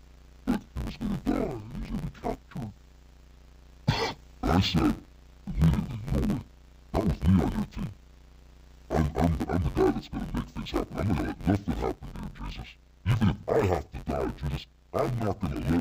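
Throughout, interleaved audio read as planar splits each 10.88 ms block into halves, giving a dull, robotic buzz near 92 Hz without the octave drop a resampling error would cause.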